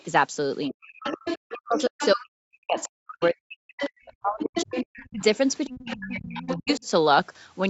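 Right at the start, from 0.0 to 0.04 s, there's a faint scrap of the other side's voice leaking through, very far down, maybe 35 dB under the talker. It comes back much louder from 0.82 to 2.25 s, only about 10 dB below, then around 20 dB down from 2.78 to 3.26 s, and about 10 dB down again from 3.79 to 6.88 s. The likely cause is the far end playing on a loudspeaker and the echo canceller not fully removing it from the mic.

Overlapping that, from 0.68 to 6.85 s, you get speech suppressed in double talk. The talker's own voice keeps dipping and breaking up, sometimes by as much as 40 dB, for about four seconds in total. That's likely the canceller failing to separate the near voice from the echo and turning both down.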